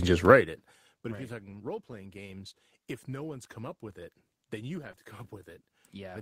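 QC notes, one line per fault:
1.11–1.21 s and 4.83–4.89 s: lost packet rebuilt from error correction. The missing stretches, consistent with three and then two 20 ms packets, were replaced from the low-bitrate copy carried in the following packet. There is no gap, but the speech turns briefly rougher and noisier.
4.91–4.99 s: short concealed packet loss, two back-to-back 20 ms holes. The decoder extended the preceding speech, pitch-based if voiced and shaped noise if not, then crossfaded back. This produces a short smear or wobble, and a brief consonant may drop out.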